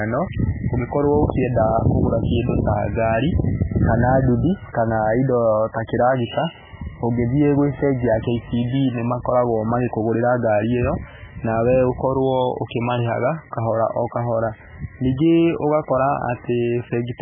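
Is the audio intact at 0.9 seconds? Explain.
No. At 0.9 seconds, as throughout, the speech sounds watery and dull, with nothing above 3.5 kHz. This is likely heavy MP3 compression at a very low bitrate, which fits about 8 kbps.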